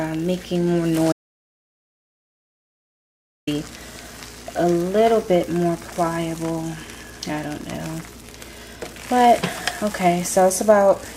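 At 1.12 s the sound cuts off mid-flow and doesn't come back until 3.47 s: an audio dropout to silence lasting about 2.35 s. The gap is silent with no room tone, most likely the input dropping out while the recorder kept writing, so whatever happened there is simply gone.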